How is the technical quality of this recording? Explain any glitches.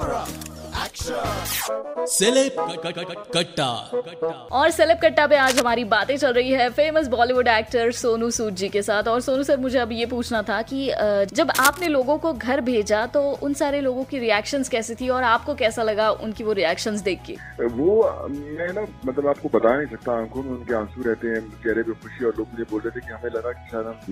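The recording has two short glitches, both cable scratch noise. At 5.43 to 5.62 s and again at 11.55 to 11.86 s, a worn cable or connector likely shifted, its contact resistance jumping rapidly. That throws dense, uneven bursts of scratchy rustling over the sound, nearly as loud as the sound itself.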